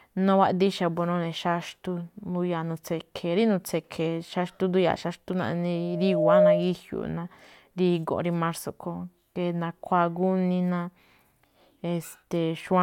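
From 5.75 to 6.75 s, a loudspeaker feedback squeal appears: the microphone re-amplifies its own loudspeaker, and a single 613 Hz tone swells for most of a second to about 10 dB above the speech. A steady whistle or hum would not keep growing like this.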